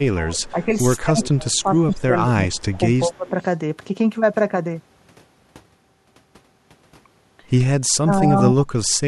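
From 0.0 to 0.67 s, 1.03 to 2.59 s, 3.05 to 3.34 s and 8.02 to 8.88 s, the speech dips by up to about 35 dB: speech suppressed in double talk, likely an echo canceller ducking the live voice itself while both sides talked. Overlapping these stretches, at 0.45 to 0.76 s, 1.23 to 1.57 s, 1.9 to 1.98 s and 3.27 to 3.45 s, a faint copy trails 181 ms behind, about 20 to 35 dB down. This is echo leak, likely residual loudspeaker pickup. Unlike the suppression, it adds a delayed duplicate rather than removing the original.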